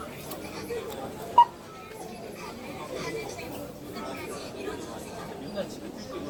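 Throughout the recording the sound is swirly, smeared and hollow, with blurred attacks, more degraded than a single pass at a moderate bitrate would leave it. This is generation loss, likely from repeated lossy re-encoding, around seven passes, with a character that fits Opus near 64 kbit/s. Each pass requantised the audio on a shifted frame grid, so errors accumulated. A spectrogram would show smeared transients below a ceiling near 20.1 kHz, and the waveform would show softened onsets.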